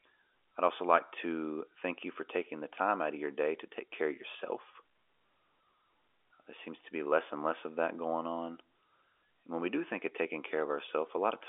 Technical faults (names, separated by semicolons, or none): none